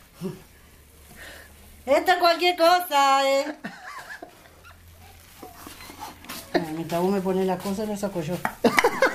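Nothing in this recording stands out as a technical fault. No dropouts, glitches or other disturbances can be heard at any point.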